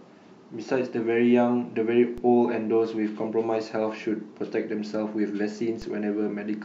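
A speech clip with two DC steps, at 2.18 s and 5.82 s, each heard as a low thump. The waveform's zero line jumps by about -28 dBFS and then drifts back as a 20 Hz high-pass bleeds it off, showing as a brief broadband vertical line with energy at the bottom of the spectrogram.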